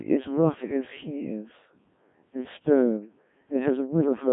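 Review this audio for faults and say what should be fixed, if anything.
The speech runs through a Codec 2 vocoder for the whole clip. It sounds robotic and buzzy throughout. Codec 2 does not keep the waveform. It sends only pitch, voicing, energy and a rough spectral envelope. The decoder then rebuilds the voice from sine waves. The damage here is heavy, which fits a very low 1.3 kbit/s mode. The band sits between 150 Hz and 3.5 kHz, with nothing above 3.6 kHz. To prevent this, record or transmit through a waveform codec at a higher bitrate.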